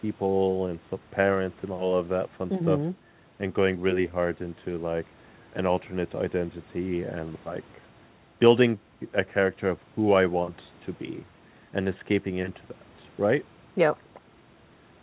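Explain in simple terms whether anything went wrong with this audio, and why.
Nothing went wrong with this speech; it carries the normal marks of a phone-style call, with the microphone processing trimming the deepest bass and the call's codec leaving nothing above about 4 kHz, which gives it the familiar narrow telephone sound.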